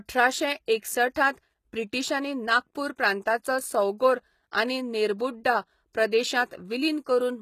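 Throughout the speech, the treble has a synthetic, metallic sheen, with s sounds coming out gritty and lispy, and nothing is present above 14.9 kHz. This is likely HE-AAC compression, at a damage level consistent with a bitrate around 20 kbps. The codec keeps only the lower spectrum and regenerates the top by copying lower bands upward under a coarse envelope, so the upper harmonics no longer line up with the real ones.

At 5.18 s and again at 5.93 s, a brief hiss leads into a sharp attack, spreading about 14 ms and 17 ms before it respectively, and the onset sounds softened. This is pre-echo. Each attack sits late in a transform block, and the quantisation noise scaled for the loud part gets spread across the whole block, filling the quiet stretch just ahead of the transient.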